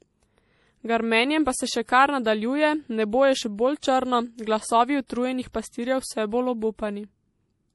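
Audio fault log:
throughout MP3 compression: no content above 11.5 kHz and plainly audible watery smearing, likely from MP3 coding at a low bitrate, around 48 kbps, cutting treble and dropping weak frequency lines.
1.85, 3.80, 5.07, 5.52 s pre-echo: a brief hiss of 21 to 36 ms before attacks (after "pa se še", after "nebo je še bolj", before "pastirjev vse bolj") as block-wide quantisation noise spills ahead of each onset.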